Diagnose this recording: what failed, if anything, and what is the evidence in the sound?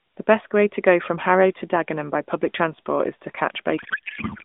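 Codec payload misread, from 3.78 s to 4.43 s at the end of the speech: the narrowband AMR speech abruptly turns into garbled noise and warble that barely tracks it. The decoder is reading frames with misplaced fields, which fits octet-aligned AMR being parsed as bandwidth-efficient.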